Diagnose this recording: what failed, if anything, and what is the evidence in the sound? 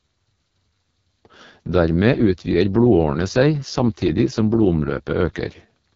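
The failure sits at the codec stage: the speech passed through the AMR wideband (HD Voice) codec at its lowest mode, which points to 6.6 kbit/s. Throughout, the speech sounds rough and raspy, and nothing survives above 7.3 kHz, because the codec's band ends near 7 kHz, with 6.4 to 7 kHz synthesized from shaped noise rather than coded.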